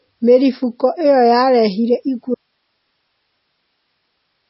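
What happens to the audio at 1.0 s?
At 1.0 s the speech carries MP3 compression artefacts, likely from low-bitrate MP3 encoding, present through the whole clip. Short of bits, which fits roughly 24 kbps, the encoder cuts everything above 5.6 kHz and drops weak frequency lines, leaving dull, watery, swirling sound with smeared attacks.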